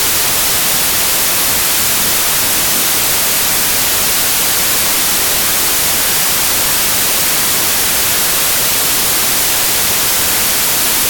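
Throughout, loud hiss-like noise swamps the speech, which sits buried underneath at half speed and an octave low. This is a wrong sample width: data written as 32-bit integers are read as 16-bit, so byte pairs form bogus values and each sample becomes two.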